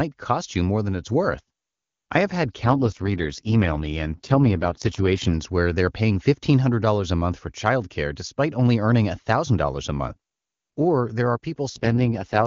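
From 2.63 s to 5.34 s, between "I have had" and "where they're paying", the speech turns rough, raspy and synthetic without any gap or loss of bandwidth. It roughens again from 11.69 s to the end, after "there are". This is an AMR rate drop. The AMR-WB link scaled down for a weak radio channel, which fits a fall from its clean 23.85 kbit/s mode to 6.6 kbit/s.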